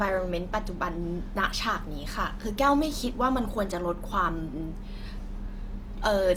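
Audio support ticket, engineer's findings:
Opus compression, likely cause; full clip. Encoder in CELT music mode at a low rate, consistent with roughly 24 kbps. Band energies kept, but starved bands are filled with folded lower-band content or noise instead of true detail. Speech turns rough and grainy, with plainly audible damage but little swirling and few spectral holes. Bandwidth stays full, with content up to 20.2 kHz, so no muffling.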